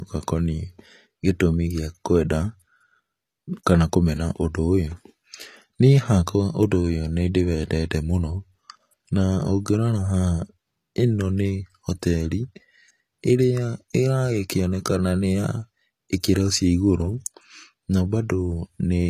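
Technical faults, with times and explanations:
Throughout, low-bitrate audio saved at a high bitrate: the speech stops dead at 14.9 kHz and keeps a smeared low-bitrate texture. That likely comes from a very lean encode, fitting HE-AAC near 24 kbit/s, later re-saved as high-rate MP3, which can't restore what was lost.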